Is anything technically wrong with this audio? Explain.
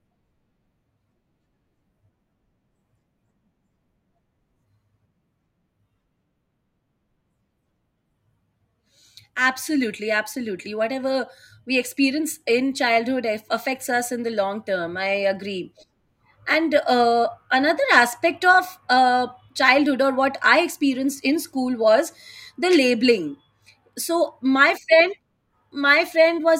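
No, nothing in this speech recording stood out as technically wrong on listening.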